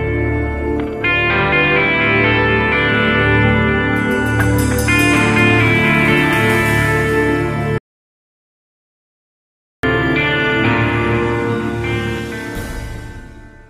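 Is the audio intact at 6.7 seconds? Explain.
Yes, at 6.7 seconds the audio is intact, with no dropout, click, distortion or other fault to be heard.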